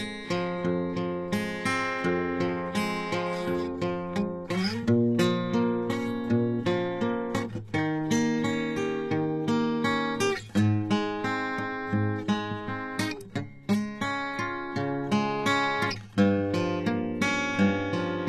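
Throughout the music, the treble points to likely HE-AAC compression at a very low rate, around 16 kbps: only the lower spectrum is coded properly, and the upper bands are rebuilt by copying lower material upward under a coarse envelope. The damage is plainly audible. The top end sounds synthetic, with harmonics that fail to line up across the crossover, and a gritty, metallic sheen.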